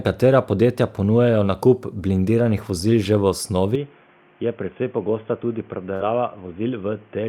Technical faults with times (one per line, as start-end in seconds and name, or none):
3.75-7.28 input switched to a poorer device
5.95-6.02 short concealed packet loss